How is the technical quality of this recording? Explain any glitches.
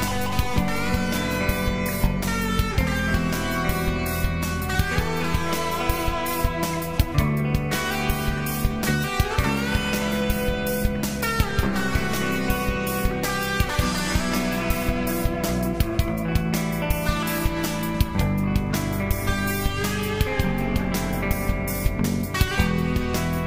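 A regular series of clicks spoils the recording. From 0.54 s to 22.48 s, about ten short clicks arrive every 2.19 s. This is likely clock drift buffer slips: two clocks differing by roughly 70 parts per million let a buffer drift until a handful of samples are dropped or repeated. On a waveform each slip shows as a tiny discontinuity, and on a spectrogram as a thin vertical broadband line at evenly spaced intervals.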